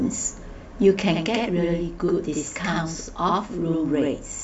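From 1.14 s to the end, a channel delay (doubling) appears. One channel runs about 85.3 ms late, which fits a 4096-sample buffer. Summed to mono, the late copy sits at equal level, so the speech sounds doubled, like a slap echo.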